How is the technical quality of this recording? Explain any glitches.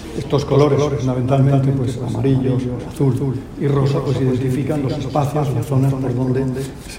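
A doubled audio track runs throughout, likely from the signal being captured a second time by a slower path. A full-band copy trails about a fifth of a second behind, only a few decibels quieter, with no decay or room colour, so every sound gets a distinct echo.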